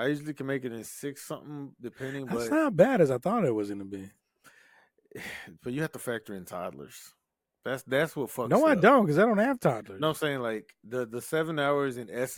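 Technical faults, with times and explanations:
No technical faults can be heard, so there are no times or explanations to give.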